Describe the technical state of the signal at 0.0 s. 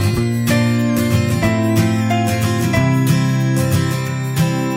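At 0.0 s a switching supply whistle is already present and persists through the whole clip: a high tone near 2 kHz, wandering between about 1.6 and 2.03 kHz, sitting roughly 20 dB below the signal, as a switching power supply runs in an audible burst mode or beats with another one.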